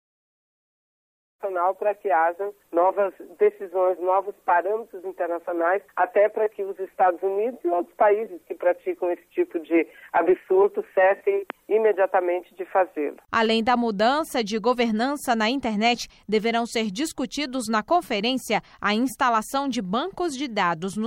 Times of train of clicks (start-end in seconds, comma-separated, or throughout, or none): none